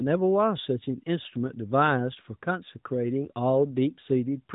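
No technical faults can be heard in this speech clip. It comes through an AMR narrowband mobile codec path, with nothing above about 3.8 kHz and only light codec colouring, which fits the 12.2 kbps mode.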